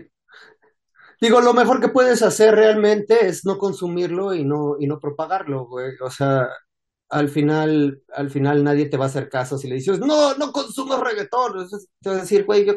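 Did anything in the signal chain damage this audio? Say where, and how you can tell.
No, nothing in the signal chain damaged this audio.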